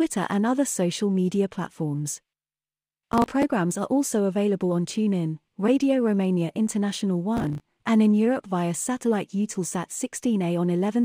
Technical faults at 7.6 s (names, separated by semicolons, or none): processor overload crackle